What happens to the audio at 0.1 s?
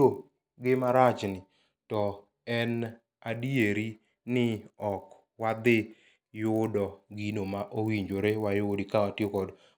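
At 0.1 s the speech carries a 50 Hz buzz from a resampler restarted on every block: each 20 ms block is converted separately, leaving an edge error at every block boundary throughout the clip.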